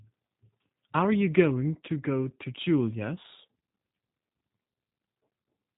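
From start to finish the speech carries G.729 codec damage, and it is plainly audible. The coder rebuilds each short frame from a vocal tract model, a pitch predictor and a few pulses, which fits an 8 kbit/s G.729A stream, so voices turn slightly rough and synthetic. Nothing survives above 3.8 kHz. A simple band-limit would only dull the sound; this adds a buzzy, modelled texture.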